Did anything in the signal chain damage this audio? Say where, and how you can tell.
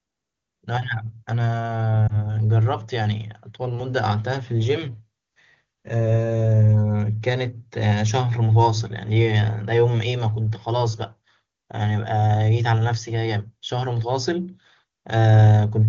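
Yes. Around 2.08 to 2.26 s the speech briefly dips or warbles, then recovers a little weak or rough. This is lost AMR speech frames on the radio link, consistent with a single dropped 20 ms frame. The wideband decoder bridged the gap by repeating its last good pitch and vocal-tract settings at reduced gain.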